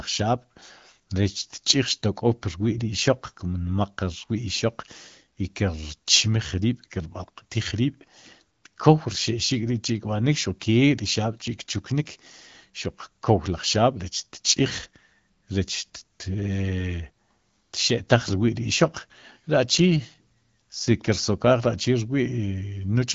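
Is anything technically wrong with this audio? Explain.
Yes. From 19.77 to 20.92 s there is an AMR rate drop. The network has the AMR-WB codec spend fewer bits on the speech itself, which fits a fall from 12.65 to 8.85 kbit/s. The speech turns rougher and more synthetic. On a spectrogram the band stays unchanged, but the harmonics blur into a grainier texture. The waveform shows no gap.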